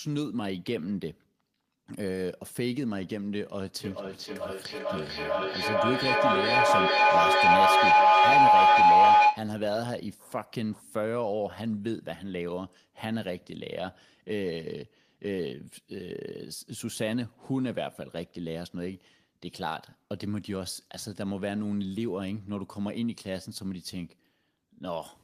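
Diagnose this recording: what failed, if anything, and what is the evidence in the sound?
Feedback howl from 3.84 to 9.54 s: two devices in the same room on one call, with the mic-to-speaker loop adding gain on every pass. Instead of fading, it narrows to a tone around 1 kHz, pulsing roughly every 400 ms, and peaks about 13 dB above the speech.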